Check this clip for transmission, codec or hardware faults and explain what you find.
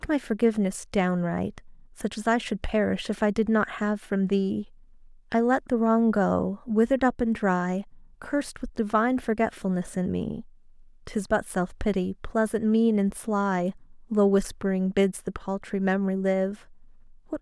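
No faults turn up anywhere in this speech recording. Nothing audible calls for further explanation.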